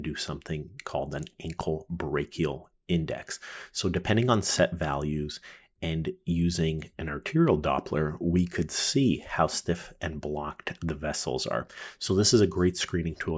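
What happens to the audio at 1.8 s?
Nothing goes wrong at 1.8 s; the audio plays through that moment intact, with no dropout, click, distortion or other fault.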